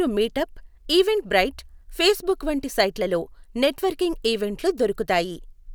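The signal carries the speech without any audible technical fault.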